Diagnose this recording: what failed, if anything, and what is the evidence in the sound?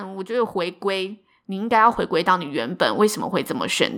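Automatic gain rising in the call-processing stage: from 0.26 s to 3.9 s the speech and the background noise swell together by about 13 dB, as the AGC judged the input too quiet. On the waveform the envelope ramps steadily upward, and the spectrogram's noise floor brightens with the speech.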